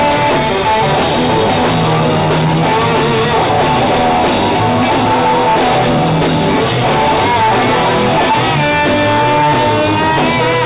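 No technical faults can be heard anywhere.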